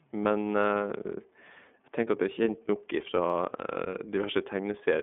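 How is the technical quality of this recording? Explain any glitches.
The technical quality is limited: the speech is narrowband and codec-coloured, with two brief clicks.

Across the whole clip, iLBC codec damage is plainly audible. The speech sounds slightly rough and synthetic, consistent with iLBC's 30 ms frames, each coded independently, at what fits its 13.33 kbps mode. A spectrogram shows a flat ceiling near 3.5 kHz, with nothing above it, and weak energy below 200 Hz.

At 0.64 s and again at 3.30 s there is a single sharp click. The likely cause is dropped samples, a handful lost in a fraction of a millisecond, making the waveform jump abruptly. Each click shows as a thin vertical line spanning the spectrogram.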